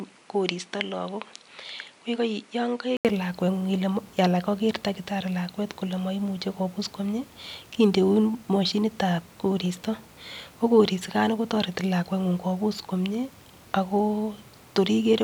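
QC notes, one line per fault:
0.00–3.05 s, input switched to a poorer device: the speech stops at 10.5 kHz, runs roughly 5 dB quieter over its own noise floor about 45 dB down, and then there is an 80 ms gap. Band, level and noise all change together, so this is likely a device change rather than simple filtering.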